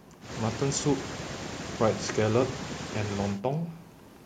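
Nothing stood out on listening to this recording of speech.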